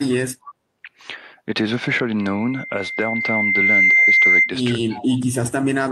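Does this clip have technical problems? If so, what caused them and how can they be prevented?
Yes. At 0.46 to 0.53 s and 4.93 to 5.07 s, an echo leak, likely from a far-end echo canceller missing loudspeaker pickup, returns a faint copy about 288 ms late, roughly 20 to 25 dB below the speech. Better echo cancellation and tail coverage, or a headset at the far end, would prevent this.

From 4.86 to 4.94 s, speech suppressed in double talk, likely the canceller mistaking overlapping talk for echo, dips the voice by around 25 dB for about 70 ms. A canceller with sound double-talk detection and gentler suppression would prevent this.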